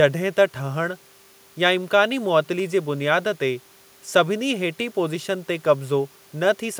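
Nothing stood out on listening to this speech recording; the only thing beneath the talking is a faint room background sitting about 35 dB below the speech.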